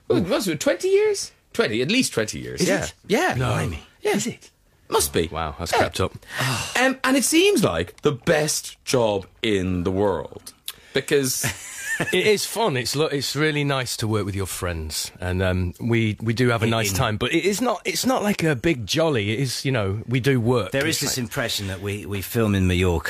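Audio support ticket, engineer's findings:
No faults found in this audio; nothing to report for the ticket.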